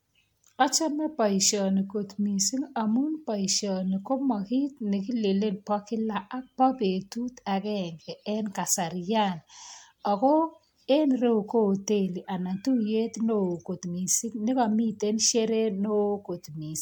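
Throughout the speech, generation loss shows as a swirling, hollow smear with blurred consonant attacks and nothing above about 19.9 kHz. One MP3 pass near 96 kbit/s would sound cleaner; the stacked damage likely comes from re-encoding around seven times on shifting frame grids.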